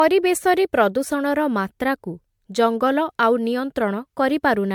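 Right through the speech there's a swirly, hollow smear and soft, blurred attacks, with nothing above 19.8 kHz. That's generation loss, likely from MP3 encoding at around 100 kbit/s repeated about five times, each pass stacking fresh quantisation noise and spectral holes.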